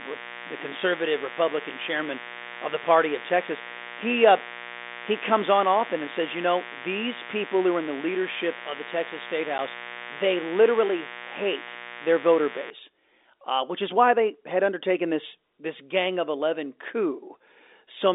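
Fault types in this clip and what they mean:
Mains buzz: Interference from the 60 Hz supply, most likely a dimmer, rectifier or missing shield, lets sharp switching spikes into the signal twice per cycle, giving harmonics that climb well into the kilohertz range. It shows as a steady, raspy buzz under the speech from the start until about 12.7 s, sitting fairly high, roughly 15 dB below the speech, and still audible within the narrow telephone band.
Packet loss filled with silence: A stretch of audio went missing in transit and the receiver played silence in its place. At 9.58 s the speech drops out for 10 ms, a hole consistent with one lost 10 ms packet. Because the gap starts and ends abruptly rather than being smoothed over, it leaves a hard-edged hole in the speech instead of a soft dropout.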